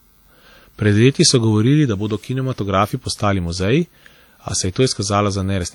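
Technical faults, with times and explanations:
Throughout, WMA compression: the likely cause is an early Windows Media Audio encoder running at a low bitrate, which fits roughly 48 kbps. Its long transform blocks smear quantisation noise over tens of milliseconds around each syllable, and quieter spectral detail is discarded outright. The speech takes on a plainly audible ringing, washy quality, with a hiss that swells and fades along with the voice rather than sitting at a steady level.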